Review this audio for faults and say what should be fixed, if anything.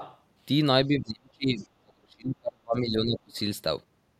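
Other side's voice leaking through at 0.00–0.19 s and 1.59–1.67 s: a faint second voice sits about 15 dB and about 20 dB below the talker, likely loudspeaker echo the canceller left behind. On a spectrogram it shows as weak, separate harmonic traces under the main speech. To prevent it, improve echo-path tracking so the residual echo is fully cancelled or suppressed.

Speech suppressed in double talk from 0.87 to 3.36 s: for roughly two seconds of that span, the talker's level drops by up to around 35 dB and breaks up, likely because the canceller treated simultaneous speech as echo. The waveform shows gouged, uneven envelopes, and the spectrogram shows high-frequency energy thinning out. To prevent it, use double-talk detection that stops near-end speech from being suppressed along with the echo.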